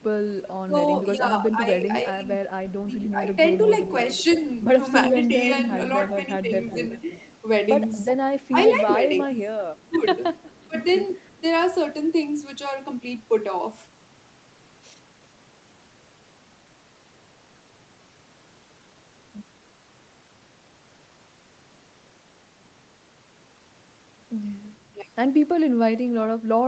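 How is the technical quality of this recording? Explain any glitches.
The speech has call-processing glitches: dropouts during overlapping talk and an audible returned echo.

Speech suppressed in double talk occurs at 1.04–3.23 s, 8.5–11.43 s, and briefly at 24.94 s. The voice dips by about 5, 25 and 10 dB. Likely cause: an echo canceller turning down speech it couldn't separate from loudspeaker echo.

Echo leak appears at 3.87–7.33 s and 8.43–11.39 s. A copy of the voice trails about 0.37 s behind, roughly 5 dB and then 15 dB below it. Likely cause: far-end loudspeaker pickup the canceller missed.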